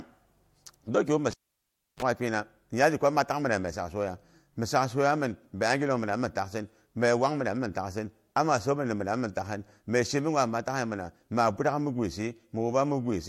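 A speech recording, broken at 1.31 s just after "dong kyom mi" by a cable pulled and plugged in. A pop cuts the signal, leaving near silence for about 0.67 s. A brief 50 Hz mains buzz of about 31 ms then sounds as the plug's tip makes contact, and a second pop brings the sound back by 2.03 s. That buzz between two pops marks a physical reconnection rather than a digital dropout.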